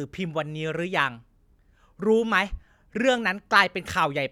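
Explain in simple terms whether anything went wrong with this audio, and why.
Nothing went wrong; the speech has no audible faults.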